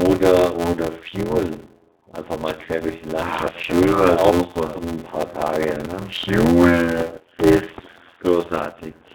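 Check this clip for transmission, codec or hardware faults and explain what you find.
Three faults are audible in the speech.

Speex codec, throughout: low-rate CELP coding at about 11 kbps over a 200 Hz to 3.7 kHz band leaves the voice noisy, hoarse and narrow.

Block size mismatch (padded), throughout: shorter blocks are zero-padded into a larger read, which fits a 512-sample block. This adds an 86 Hz buzz and slows the speech to 0.625 times its speed at roughly normal pitch.

Train of clicks, 5.85 to 7.80 s: about seven similar pops arrive evenly, 4.1 per second, roughly 10 dB above the speech. The likely cause is electrical interference or a struggling interface.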